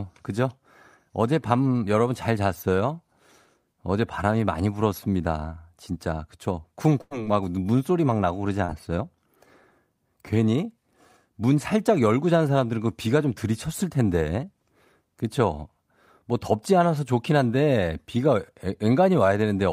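A burst of packet loss runs from 7.01 to 7.13 s. About 100 ms of the call failed to arrive in time, and the receiver stretched the last sound across 93 ms of that gap, fading it down, so a held buzz or dying hiss replaces the missing speech before it resumes further on.

Short concealed packet loss follows at 8.65 to 8.70 s. Roughly 40 ms never reached the decoder, and 33 ms of synthetic continuation blended back into the real signal, heard as a brief smear or wobble where a short sound may drop out.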